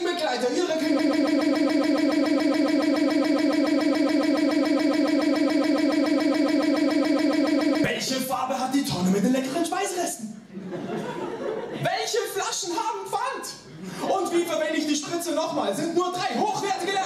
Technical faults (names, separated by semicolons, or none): broken-record loop